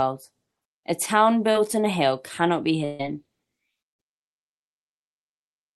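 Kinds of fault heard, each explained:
Short concealed packet loss: Around 1.51 to 1.57 s, roughly 40 ms of the call never reached the decoder in time, so the receiver patched the hole by carrying the previous sound forward for about 32 ms before easing back into the real signal. You hear it as a quick smear or little wobble rather than a gap, and anything very brief in that spot can simply vanish.
Burst of packet loss: Two of these. Right after "hill cannot be", from about 2.85 to 3.01 s, around 140 ms went missing in one run. The concealment fills the whole stretch with no silence, stretching the last sound into a held, dwindling buzz or hiss before the audio picks up further along. The second, near 3.93 to 4.01 s, loses about 60 ms and sits inside the end fade-out, so it's softer.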